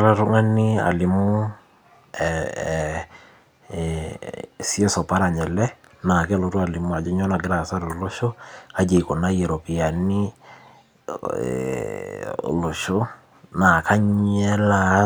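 Nothing is technically wrong with this speech recording.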